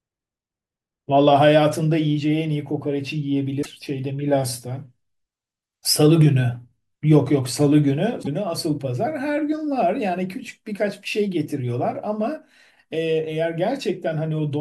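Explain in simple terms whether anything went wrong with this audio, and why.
At 3.61 s and 8.22 s the speech jumps ahead, with a brief glitch. The likely cause is a broken MP3 bit reservoir: frames were cut out, so the next frame looked back for its data and found bytes from another frame.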